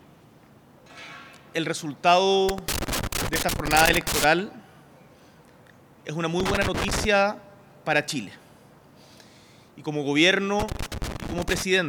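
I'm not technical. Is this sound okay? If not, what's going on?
No. A worn or dirty contact in a plug or socket is making and breaking as it shifts. That's loose connector crackle: the signal keeps cutting in and out, giving irregular scratchy crackling from 2.49 to 4.24 s, 6.40 to 7.05 s and 10.60 to 11.62 s.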